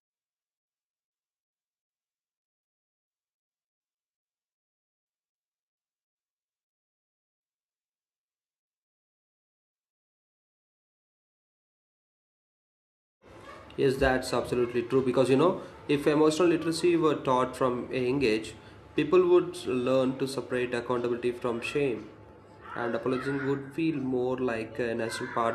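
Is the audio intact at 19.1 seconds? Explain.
Yes, the audio is intact at 19.1 seconds, with no dropout, distortion or other fault audible at that point.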